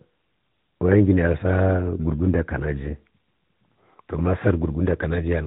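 From start to finish the speech carries the sound of the AMR narrowband mobile codec, and the damage is plainly audible. Everything above 4 kHz is gone, leaving a boxed-in telephone band with no sibilant air. The voice is rebuilt from a vocal-tract model excited by sparse pulses, and at what sounds like a mid-range rate near 10 kbps that excitation comes through as a buzzy, slightly synthetic edge on every syllable.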